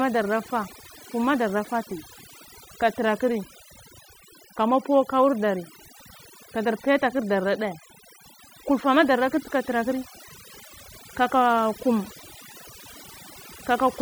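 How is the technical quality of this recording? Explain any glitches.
The recording suffers from overdone noise removal, present throughout. A noise reduction stage set far too aggressively shuts down individual frequency bands whenever they sit near its noise estimate, taking quiet parts of the speech with them. The background collapses into near silence dotted with twinkling specks.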